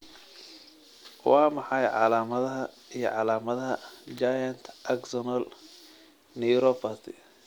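At 4.18 s a sharp snap, peaking at about -25 dBFS, cuts across the speech, likely an electrical switching spike from a nearby switch arcing into the line.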